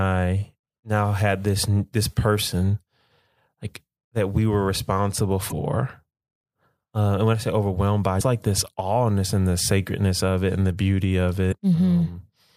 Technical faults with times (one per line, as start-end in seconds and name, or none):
5.49-5.53 damaged data in a compressed stream
8.17-8.21 damaged data in a compressed stream
11.49-11.53 damaged data in a compressed stream